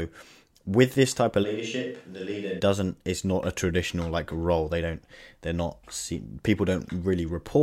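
From 1.45 to 2.58 s, the speech suddenly turns roomy and hollow, with thinner bass. The level drops by about 10 dB, and room noise sits around 40 dB below the speech. This points to a switch to a distant microphone, likely because the close microphone dropped out.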